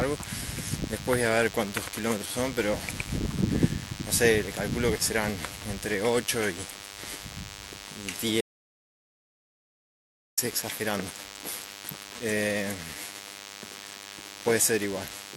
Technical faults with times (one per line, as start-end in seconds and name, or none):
0.00-15.37 DECT cordless phone buzz
8.41-10.37 audio dropout to silence